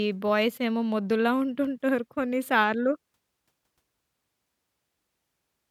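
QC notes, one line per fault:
1.65 s and 2.44 s, dropped samples: the stream likely skipped a tiny run of samples, well under a millisecond each time, so the waveform jumps straight to a later value. Nothing audible is lost, but each jump lands as a single sharp click in the speech.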